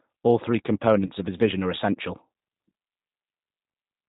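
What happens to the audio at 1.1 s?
At 1.06 s the speech breaks up briefly, just before "of his vision are". It is VoIP packet loss concealed by the speech codec, spanning 1.06 to 1.11 s. About 30 ms of audio never arrived, which fits a single lost packet. The decoder filled the hole by repeating its last pitch and vocal tract shape at falling gain. That stretches the sound into a fading buzzy tone or coloured noise. Because each frame builds on the previous one, the voice stays weak or distorted for a moment after the gap.

Under that dropout runs G.729 codec damage, and it is plainly audible. The sound fits an 8 kbit/s G.729A stream. Each 10 ms frame is rebuilt from a vocal tract filter, a pitch predictor and a few pulses. Nothing above 4 kHz passes, so the speech sounds dull. It also has a rough, synthetic edge.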